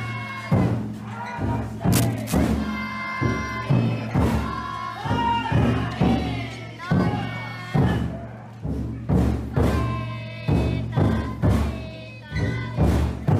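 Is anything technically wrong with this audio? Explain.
Yes. From 1.92 to 2.40 s there is cable scratch noise, likely from a worn cable, connector or control being moved so its contact resistance fluctuates rapidly. That injects dense, irregular bursts of noise, heard as a brief scratching rustle roughly 10 dB below the sound.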